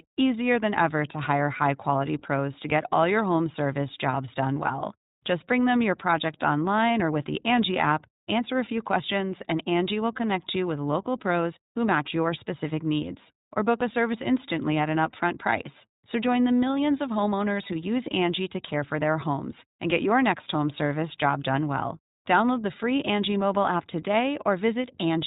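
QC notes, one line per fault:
throughout, iLBC codec: the speech was squeezed through a narrowband VoIP coder that rebuilds each short frame's excitation on its own, and the plainly audible texture fits the 15.2 kbps mode with 20 ms frames. The voice comes out clear but slightly rough and synthetic. The narrowband path also removes everything above 4 kHz, so sibilants lose their edge and the whole clip sounds boxed-in and telephone-like.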